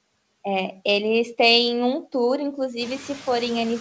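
Noise suppressor artifacts run through the whole of this speech clip. The suppressor treats the steady background as noise and pulls those frequency bands down by about 18 dB frame by frame, so the noise floor dips in the gaps between words and swells back up beneath them as speech opens the bands. The room noise itself climbs by about 15 dB around 3 s and still sits about 17 dB under the speech. The call path shows no content above 8 kHz, which fits a wideband codec such as G.722.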